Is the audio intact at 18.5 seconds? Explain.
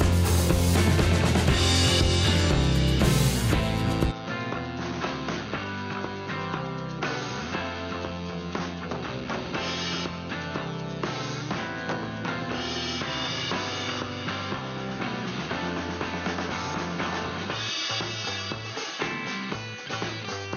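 No. From 4.11 s to the end, the input was likely switched to a poorer device, with no gap at the switch. The new path passes nothing above 6.5 kHz, so the sound turns dull and boxy, drops roughly 10 dB in level, and carries fresh low background noise, roughly 30 dB below the signal.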